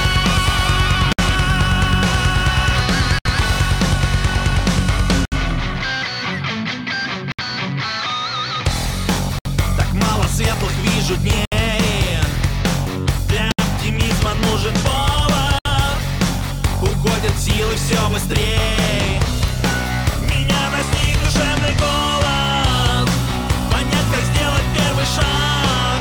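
Pieces of this audio were encoded separately and butted together without trimming, so each join keeps the encoder's start-up delay and last-frame padding. The result is a gap at a join of encoded pieces every 2 s: at 1.13, 3.19, 5.25, 7.32, 9.39, 11.45, 13.52 and 15.59 s. The first lasts 59 ms and the rest 67 ms. Each is a sudden dropout with smeared edges, after which the sound resumes exactly where it broke off.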